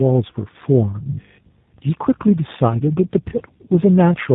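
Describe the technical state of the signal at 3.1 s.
At 3.1 s, as throughout, tandem speech coding: two speech codecs in series, consistent with GSM full rate then G.729A, the second re-encoding the first's errors, leaving rough, warbly, muffled speech with nothing above 3.8 kHz.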